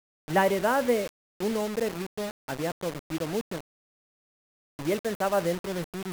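From start to finish the speech has a grainy, sandpapery edge that shifts with every syllable, which is likely low bit depth without dither. It sounds like about 4 bits with plain rounding, putting the error only around 15 dB under the signal, so quiet tails sputter or vanish.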